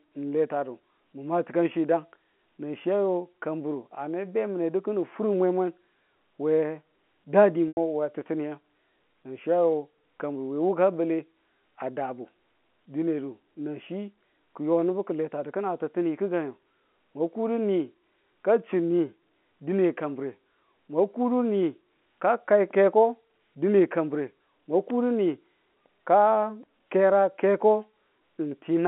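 At 7.69 s the speech breaks up for a moment, through to 7.77 s. This is packet loss with pitch repetition. About 90 ms of audio went missing, which fits three dropped 30 ms packets. To cover the hole, the receiver looped the last pitch period it had. That gives a brief held, buzzy tone. The loop fades out over roughly 50 ms and dips toward silence. Then the speech cross-fades back in, still carrying its telephone-band G.711 sound.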